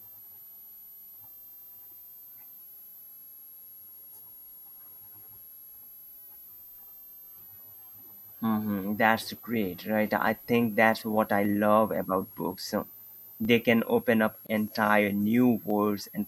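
A switching power supply running in audible burst mode puts a high whistle under the speech throughout, between 11.5 and 12.6 kHz and roughly 25 dB below it. At 5.52, 8.16, 10.27 and 11.45 s, a fraction of a millisecond of samples has likely been dropped, so the waveform jumps and each spot gives one sharp, isolated click. At 14.47 s, separately encoded pieces were joined untrimmed, and the leftover encoder delay and padding open a gap of about 25 ms: the sound drops out with smeared edges, then resumes where it stopped. Two more of the same dropped-sample clicks follow at 14.68 and 15.70 s.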